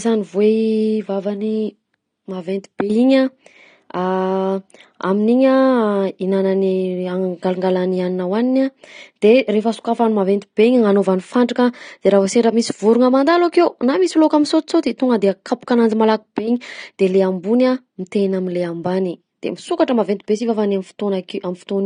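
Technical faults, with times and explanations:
Throughout, AAC compression: the speech sounds dull and smeared, with a fizzy, warbling edge on sibilants and held sounds. This is likely AAC-LC coding at a low bitrate, consistent with about 32 kbps, where the encoder lowers its cut-off and leaves spectral holes.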